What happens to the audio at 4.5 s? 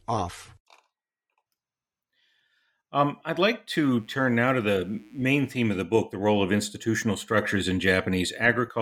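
A steady, raspy mains buzz runs from 3.98 to 5.78 s, faint under the speech: sharp switching spikes at twice the 60 Hz mains rate spray harmonics up into the kilohertz range.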